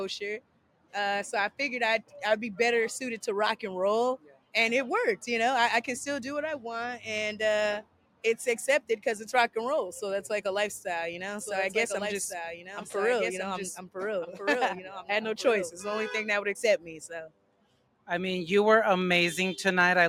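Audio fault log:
Throughout: noise suppressor applied to music or sounds. A speech-tuned suppressor stays active and treats sustained tones, ambience and reverb as noise, swinging the gain by around 15 dB. Attacks pass while held material and tails sink, so the sound pumps and thins. On a waveform the envelope breathes unevenly after each onset. On a spectrogram sustained bands fade soon after each transient and decays end abruptly instead of tapering.
0.4–0.94 s, 4.18–4.54 s, 7.82–8.24 s, 17.27–18.09 s: sound cut by the noise suppressor. In each span the suppressor mistakes the sound for noise and turns it down harder than its surroundings, by as much as about 18 dB. Steady or fading parts duck the most, and sharp onsets mostly survive. On the waveform each span shows a sudden hollow in amplitude. On the spectrogram the energy there dims across the band, with any tail cut short.
11.39–15.73 s: doubled audio track. 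A second full-band copy of the audio runs roughly one and a half seconds behind the original, about 5 dB quieter. The likely cause is a slower second capture path or an edit that leaves two copies out of step. The copy is dry, with no added decay or room colour, and it enters and leaves abruptly. On a spectrogram the patterns repeat at a fixed offset. The waveform thickens sharply at the start of the span and thins sharply at its end.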